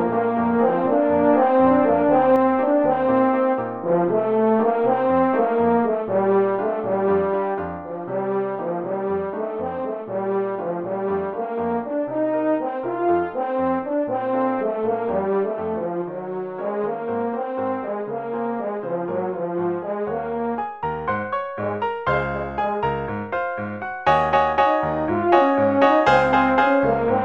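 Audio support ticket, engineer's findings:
Sound heard twice from start to 2.36 s, equal-level copy about 0.7 s behind, ending abruptly. Doubled audio track, likely a slower second capture path.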